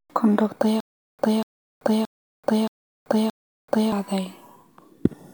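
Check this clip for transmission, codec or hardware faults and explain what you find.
The player or stream likely stalled, replaying its last fragment at each retry before running empty. From 0.80 to 3.92 s this causes stutter with silent gaps: a 0.24 s speech burst recurs five times every 0.62 s, separated by 0.38 s of digital silence, and the speech in between is lost.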